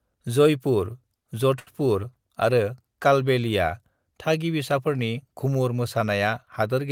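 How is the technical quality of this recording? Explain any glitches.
One glitch stands out: a short stall from a late packet between 1.59 and 1.69 s. A packet arrived late, the jitter buffer ran dry, and the receiver stretched the last sound for about 73 ms, giving a brief held sound with a slight buzz or dip. Unlike a lost-packet dropout, nothing is skipped. The speech resumes exactly where it stopped, just 73 ms later.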